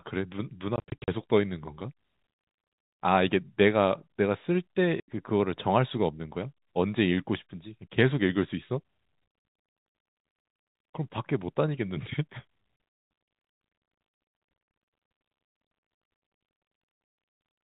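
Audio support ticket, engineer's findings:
Packet loss filled with silence: network dropped packets and the receiver inserted silence. Speech is cut by hard-edged gaps: scattered 20–40 ms holes from 0.76 to 1.08 s, an 80 ms gap at 5.0 s, and 40 ms at 12.76 s. Gap lengths fit 20 ms packets. G.711 telephone band intact.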